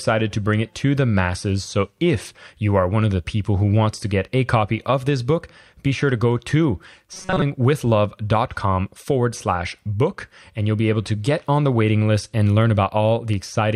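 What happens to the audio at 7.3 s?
At 7.3 s the speech turns into robotic sound from repeated short buffers. It runs from 7.14 to 7.43 s. The voice becomes a rigid, metallic buzz pinned at 188 Hz, loosely tracking the speech. The likely cause is audio arriving too slowly, so playback loops the last fragment instead. A 188 Hz buzz points to a fragment of about 5.3 ms. Most of that stretch, around two thirds or more, is repeats rather than new audio.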